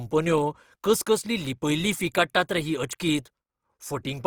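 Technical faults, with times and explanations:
Throughout, Opus compression damage: the speech has a rough, grainy edge where clean detail should be, and the texture turns noisy rather than swirly or hollow. That's likely an Opus encode in its music-style mode, where bands the encoder can't afford are filled by copied or noise-like content instead of left empty. The bandwidth stays full, with nothing above about 20.2 kHz, and the plainly audible coarseness fits a low bitrate around 24 kbps.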